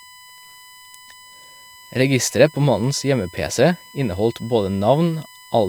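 USB whine runs through the whole of this speech recording as a steady tone at 1 kHz, sitting roughly 25 dB below the speech and strongest at that fundamental. Its fixed pitch points to current drawn by a USB bus in 1 ms frames, which repeat a thousand times a second and leak into the audio path through shared power or ground, leaving a constant whistle under the speech from start to finish.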